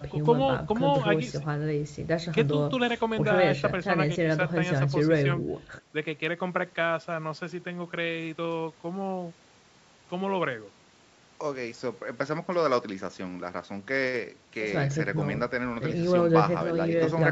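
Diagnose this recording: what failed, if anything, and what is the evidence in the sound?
Nothing stood out on listening: the speech has the ordinary character of a call's microphone processing, with nothing above 8 kHz, and that is normal behaviour rather than a failure.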